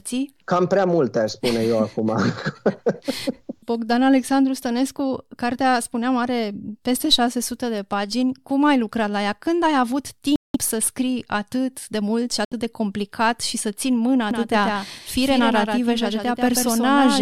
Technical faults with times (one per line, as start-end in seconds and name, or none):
10.36-10.56 Bluetooth dropout
12.45-12.53 Bluetooth dropout
14.31-17.21 doubled audio track